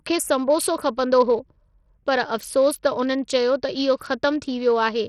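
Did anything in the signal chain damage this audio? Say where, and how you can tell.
Yes. The damage sits at the codec stage and runs through the whole speech clip: heavy Bluetooth SBC compression is the likely cause. The encoder's small bit pool starves the weak upper sub-bands and quantises the rest coarsely, which fits a low rate of around 64 kbps. The treble flickers in and out, a gritty granular noise clings to the sound, and aliasing rides on it. The band stops near 19.7 kHz.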